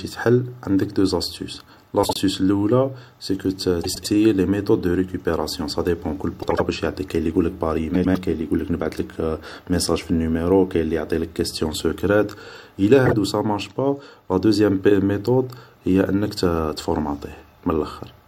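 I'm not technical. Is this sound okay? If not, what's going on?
No. The speech has frames out of order at five spots: 2.03–2.18 s (just before "اللول سيكو"), 3.83–4.07 s, 6.42–6.60 s (between "صاديبون كل" and "واش يعطيك"), 7.94–8.17 s and 13.06–13.13 s (just before "سامارش با"). In each spot, two neighbouring chunks of sound, each about 26 to 105 ms long, were played in the wrong order, so the halves of that short stretch are swapped. You hear a brief garbled flutter. Unlike a dropout or skip, nothing is missing, and the timing doesn't jump ahead.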